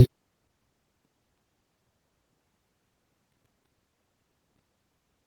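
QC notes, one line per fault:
Throughout: Opus voice compression. The speech sounds hoarse and slightly robotic because its lower band is coarsely coded, while content above 8 kHz remains. This fits a hybrid mode at around 16 kbps. Unlike a plain low-pass, the top isn't simply cut away.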